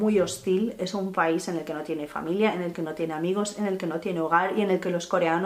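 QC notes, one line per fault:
No technical faults are audible; the signal holds steady, with no interruptions, level jumps, or added disturbances at any point.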